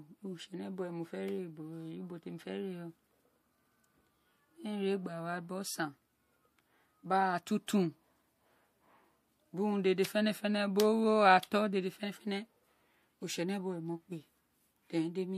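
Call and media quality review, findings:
Pre-echo at 7.67 s: short hiss smears ahead of a speech onset, spread 15 ms, noise up about 12 dB. Transform codec block of 36 ms. Short blocks never switched in.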